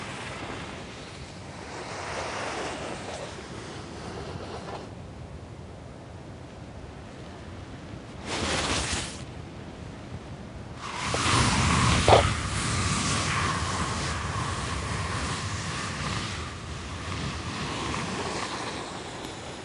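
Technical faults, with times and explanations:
Throughout, wrong sample rate: everything runs at two-thirds speed and sits about 7 semitones lower, a ratio that fits 48 kHz material played back at 32 kHz with no conversion. Because samples leave at a slower rate than they were captured, duration stretches and every frequency drops by the same factor. Unlike a pitch shift or a time-stretch, pitch and tempo move together, and transients simply smear without warbling or phasey artefacts.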